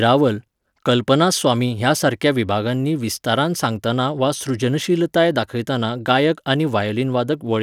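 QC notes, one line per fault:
6.10–7.62 s, block size mismatch (truncated): one stage writes blocks longer than the next stage reads, so the tail of each block is dropped. Each cut leaves a seam, heard as a buzz near 46.9 Hz, which fits 1024-sample blocks, while timing and pitch stay unchanged.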